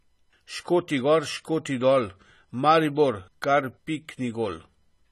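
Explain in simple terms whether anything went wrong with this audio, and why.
Throughout the speech, it sounds dull, with nothing above about 13.6 kHz, and sibilants have a warbly, fizzy edge. That points to AAC compression, likely squeezed too hard. A simple treble cut would sound muffled but clean. The fizz shows it's compression.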